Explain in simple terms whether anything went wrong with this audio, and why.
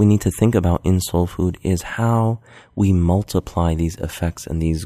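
Listening closely, nothing in the recording stood out as having gone wrong.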